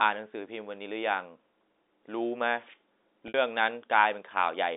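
At 3.28 s, a run of packets went missing on the way to the receiver, and it concealed the hole with packet loss with pitch repetition, looping the last pitch period it had received instead of leaving silence. The gap lasts about 60 ms, to 3.34 s, which fits three 20 ms packets. It sounds like a brief, slightly buzzy hold on the speech, fading as the repeated cycle decays, heard through the narrow 250 Hz to 3.7 kHz band of the telephone line.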